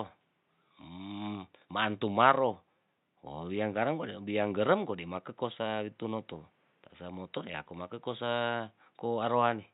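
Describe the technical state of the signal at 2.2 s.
The signal at 2.2 s is intact, with the speech carried cleanly over a low room noise about 45 dB below it.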